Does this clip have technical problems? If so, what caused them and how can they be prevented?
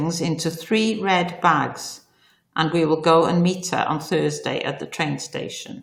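No, the speech signal carries no audible technical faults, so nothing here calls for a cause or a preventive step.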